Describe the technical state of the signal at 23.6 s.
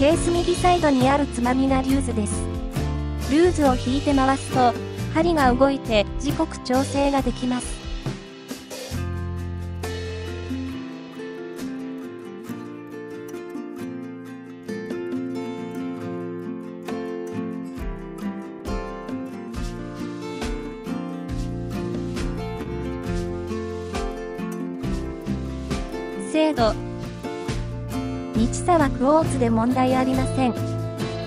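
At 23.6 s the signal is affected by clock drift between sender and receiver, present across the whole clip. The sender's clock runs slow, by roughly one and a half percent, so audio reaches the receiver slightly more slowly than it is played out. The jitter buffer keeps draining, and the receiver has to stretch the stream to avoid running dry.

The moment also falls within the repeated timing corrections that run from 0.06 s to 29.99 s. To stay in step with the slow sender, the receiver keeps repeating short pieces, all in the same direction, so playback runs at about 99% speed. Across the span these repeats add up to about 0.4 s of extra duration. Each one is small and unevenly spaced, heard, if at all, as a slight hiccup or an unsteady tempo.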